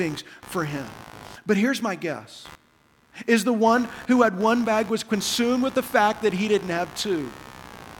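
A buzzing, chirping texture sits under the speech for the whole clip, pulsing at around 70 times a second and roughly 20 dB below the voice. This is computer activity noise: processor or graphics load changes disturb the shared ground, bleeding into the audio circuit.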